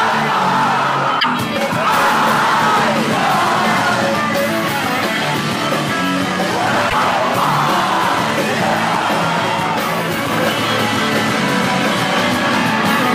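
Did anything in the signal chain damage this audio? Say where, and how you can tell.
Yes. At 1.19 to 1.25 s and 6.89 to 6.94 s the audio jumps ahead, with a disturbed stretch of about 56 ms, roughly two frames at 26.1 ms each. On a spectrogram it appears as a brief discontinuity. This is likely a broken MP3 bit reservoir at the codec or storage stage: after frames were lost, the following frames fetched their borrowed bits from the wrong data.

From 10.33 s to the end, a doubled audio track appears abruptly. A full-band copy about 5 dB quieter trails by roughly 300 ms, with no decay or room colour. On a waveform or spectrogram every event repeats about 0.3 s later. The likely cause is a second, slower capture path mixed in.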